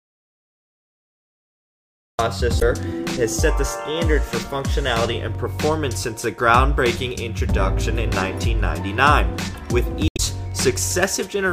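From the start until 2.19 s there is dead digital silence with no room tone, an audio dropout to silence, likely from a lost input while zeros kept being written. Brief glitches at 2.58 to 2.62 s and 10.08 to 10.19 s come from damaged data in a compressed stream, where corrupted frames make the decoder lose sync.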